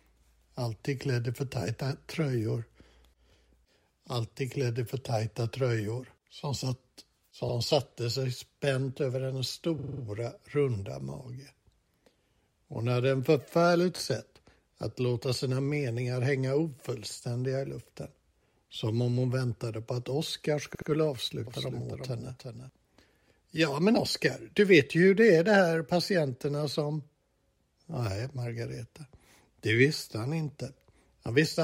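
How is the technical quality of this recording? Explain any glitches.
The recording has two kinds of glitch. The sound stutters in three places, and one short stretch is doubled.

Repeated frames occur at 7.48 s, 9.78 s and 20.74 s. A block of compressed audio replays: 70 ms once, 46 ms five extra times, then 70 ms twice. Each repeat stutters and lengthens the audio.

A doubled audio track runs from 21.47 to 22.69 s. A copy trails about 400 ms behind, roughly 5 dB quieter. It is likely a second, slower capture path. The echo is dry and cuts in and out abruptly.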